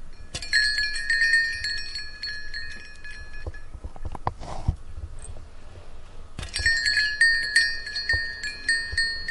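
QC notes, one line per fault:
No audible faults found in this recording.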